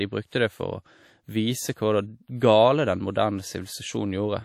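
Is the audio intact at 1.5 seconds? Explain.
No. At 1.5 seconds, as throughout the whole clip, the speech has a ringing, washy quality, with a hiss that swells and fades with the signal, and nothing is present above 17 kHz. This is likely WMA compression: the transform encoder quantises long blocks, so its noise smears across tens of milliseconds around each sound, and weak spectral detail is dropped altogether. The damage is plainly audible and fits a bitrate near 48 kbps.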